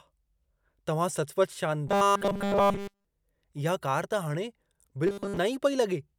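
From 1.88 to 3.05 s, and again from 5.07 to 5.37 s, the speech goes robotic, a rigid metallic buzz at 200 Hz. That's likely repeated short buffers, a 5 ms chunk looping over essentially the whole first stretch and most of the second.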